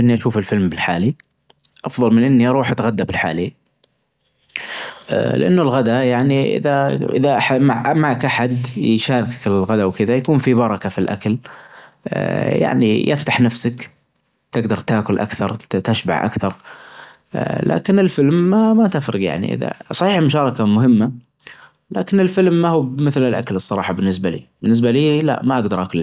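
A recording of speech, with no technical fault to be heard anywhere in it. Nothing in the audio calls for a time or a cause to be noted.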